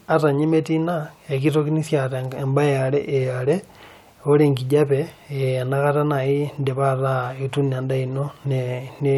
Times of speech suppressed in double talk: none

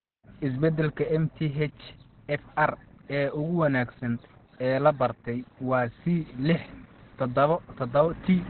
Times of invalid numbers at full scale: none

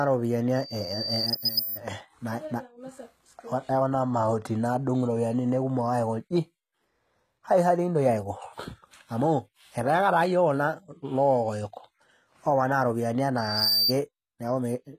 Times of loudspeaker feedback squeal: 0.55-1.82, 13.37-13.93

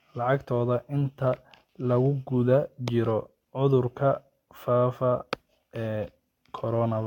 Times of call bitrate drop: none

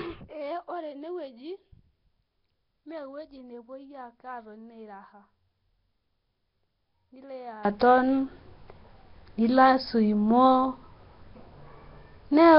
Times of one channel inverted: 0.00-7.65

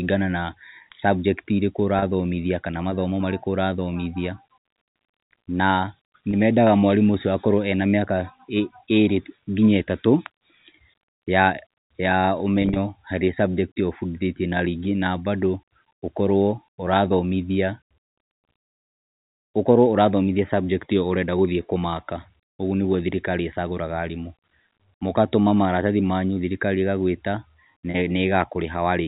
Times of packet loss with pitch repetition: 1.99-2.02, 6.31-6.33, 12.62-12.76, 27.91-27.94

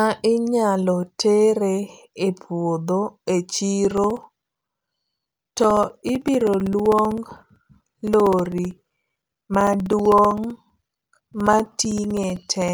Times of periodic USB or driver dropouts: 3.85-12.69

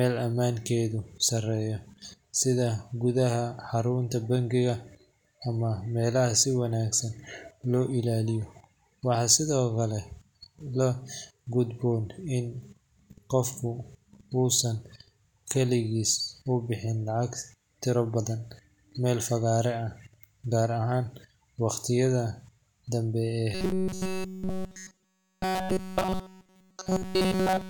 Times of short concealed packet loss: none

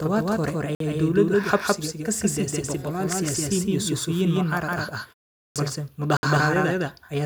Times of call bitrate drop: none

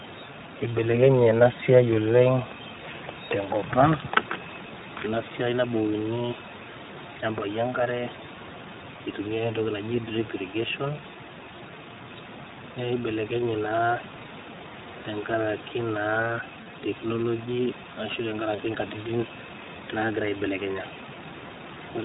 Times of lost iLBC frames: 16.64-16.67, 18.55-18.59, 21.57-21.61

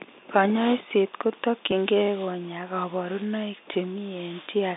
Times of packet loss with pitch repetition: 1.71, 3.74

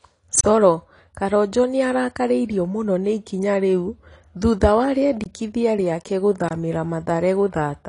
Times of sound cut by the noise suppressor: none

